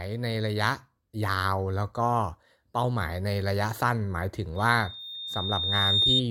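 At about 4.56 s a loudspeaker feedback squeal kicks in: a single tone near 3.7 kHz that swells over roughly a second and a half and hangs on until 6.23 s, ending up around 5 dB louder than the speech. What's happening is the mic hearing its own loudspeaker, with the loop gain tipping past one at that frequency, so the tone keeps feeding itself and climbing.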